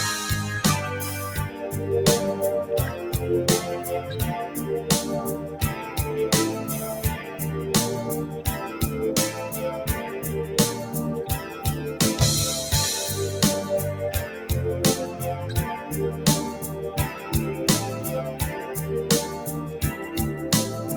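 At 14.3 s the noise suppressor misjudges the sound as noise and pulls it down by about 4 dB until 14.48 s, so roughly a fifth of a second briefly dips. The waveform shows a shallow envelope sag, and the spectrogram a faint, short-lived fade across the band.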